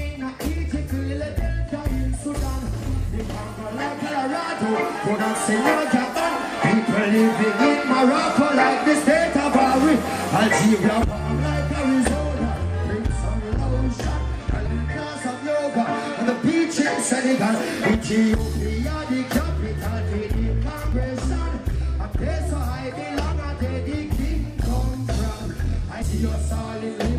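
Damaged data in the compressed stream makes the decoder misread the affected frames and lose sync until it finds the next valid frame header. This produces brief blips in the audio at 14.65 to 14.67 s, 20.92 s and 26.01 s.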